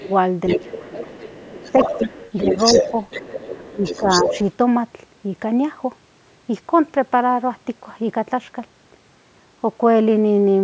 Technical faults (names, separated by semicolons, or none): speech suppressed in double talk; other side's voice leaking through